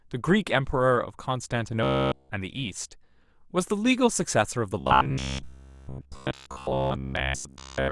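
Speech with robotic sound from repeated short buffers at 1.83–2.31 s and again from 4.80 s to 7.91 s. The voice becomes a rigid metallic buzz near 66.9 Hz, likely from audio arriving too slowly, so a block of about 15 ms is replayed while real audio is skipped. The first stretch is wholly repeated, the second mostly. A spectrogram shows flat, evenly spaced harmonic lines every 67 Hz, and the waveform shows identical segments repeating.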